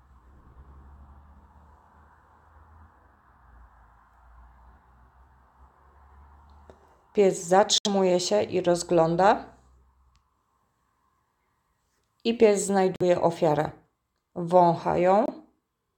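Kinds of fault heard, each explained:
Bluetooth dropout: The sound cuts to silence three times, at 7.78 to 7.87 s, 12.96 to 13.02 s and 15.26 to 15.30 s. Each hole has abrupt edges or a fade of a few milliseconds, and the sound returns further along, as if it kept playing through the gap. The missing stretches are about 70 ms, 46 ms and 23 ms, steps that fit whole packets of roughly 23 ms each. The likely cause is packets arriving too late at the headphones and being discarded.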